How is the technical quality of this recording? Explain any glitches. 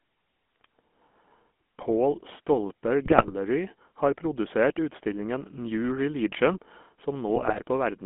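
The recording is band-limited and coded throughout, with two short corrupted passages. Throughout, the GSM full-rate codec gives the speech a buzzy, gravelly roughness; pulse-driven vocal-tract modelling and a 200 Hz to 3.4 kHz band point to the 13 kbps full-rate coder. From 3.04 to 3.33 s and 7.36 to 7.61 s, GSM bit errors corrupt the decoder's filter, pitch and gain values, producing squawks, pops and gargling.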